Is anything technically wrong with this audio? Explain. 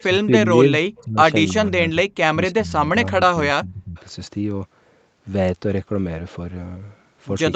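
Yes, there are two faults. Between 0.12 and 1.18 s, 1.68 and 1.96 s, 2.32 and 2.76 s, and 2.92 and 3.96 s, the speech is likely suppressed in double talk: the echo canceller treats the talker as loudspeaker echo while both sides speak, so the voice dips or breaks up, falling by roughly 15 to 30 dB.

From 3.97 to 4.02 s there is a brief echo leak, likely from the far side's canceller failing to remove what its microphone caught from its loudspeaker. A faint scrap of the voice comes back about 320 ms late, at about 30 dB below the speech.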